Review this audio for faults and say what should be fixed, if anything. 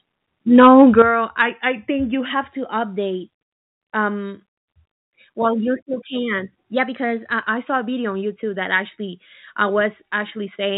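From 0.58 to 1.02 s the loudest peaks are flattened, giving a harsh crackle. This is most likely microphone overload: the input drives the converter about 4 dB past full scale, and a few percent of samples are clipped. Unlike codec distortion, it follows the signal peaks only and disappears on quieter syllables. The band limit near 4 kHz throughout is different: it comes from the call path and fits G.711 at 64 kbps. Lowering the microphone input gain before the call starts prevents the clipping.

At 1.02 s the voice and the background both fall by about 8 dB in one step. This points to the microphone volume being stepped down by the call software, reacting to the clipping just before it. A network or codec dropout would leave a gap or garbled sound. Here the sound stays clean and only gets quieter, and the background drops by the same amount. Disabling automatic input-gain control, or setting the gain correctly at the start, prevents this.

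From 1.42 to 2.25 s the sound slows by 5.6% and drops a full semitone, then snaps back. From 6.76 to 7.47 s it speeds up by 5.6% and rises about 95 cents. Each is likely a drift correction step: a clock-matching resampler jumps its rate to refill or drain its buffer. Speed and pitch move together and return abruptly, which separates this from a pitch-shifting effect or a slow wow. Using gradual, fine-grained rate adjustment in the drift compensation prevents the audible steps.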